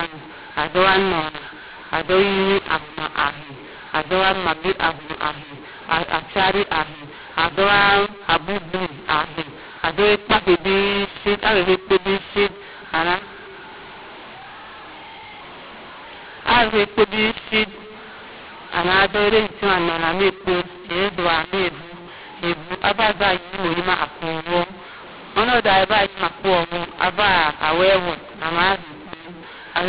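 Throughout, mu-law and A-law are mixed up: mu-law telephone samples are decoded as A-law, scrambling levels so speech turns harsh and distorted and pauses fill with noise.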